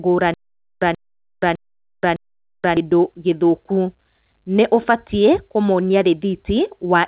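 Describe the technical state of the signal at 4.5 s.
At 4.5 s the speech is intact, carried through the WebRTC call path with nothing above 4 kHz, which fits the G.711 A-law codec running at 64 kbps.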